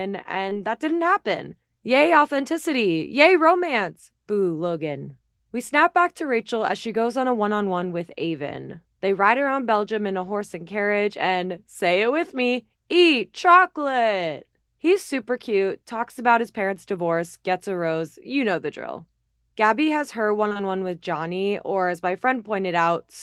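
In this speech recording, a few 20 ms stretches of the call arrived too late for the decoder, which shows up as short concealed packet loss: once at 0.49 to 0.53 s, just before "that didn't happen", then three back to back at 20.49 to 20.61 s, after "has her one" and leading into "one with". The receiver patched each gap by extending the preceding sound before blending back, so these moments come across as a brief smear or wobble, longest in the run near 20.5 s.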